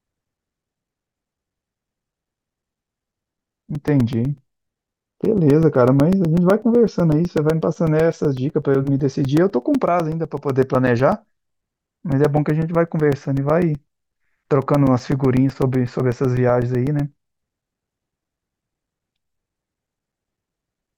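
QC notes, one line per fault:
0.13–20.87 s, periodic USB or driver dropouts: silent gaps of a few milliseconds every 0.125 s tick through the speech, showing as evenly spaced vertical notches in the waveform and spectrogram.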